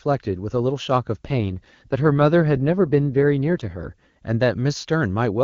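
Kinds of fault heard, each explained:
Sample clock jitter, throughout: the converter's clock wanders by well under a microsecond, so each sample lands slightly early or late. The resulting error sits around 55 dB below the speech, a faint hiss that thickens on loud, bright sounds and disappears in pauses.
AMR rate drop, 1.25 to 3.92 s: the wideband codec falls back to a lower mode, trading bits for error protection on a weak link. The bandwidth holds and nothing drops out, but the speech turns rough and synthetic, consistent with a step from 23.85 to 8.85 kbit/s.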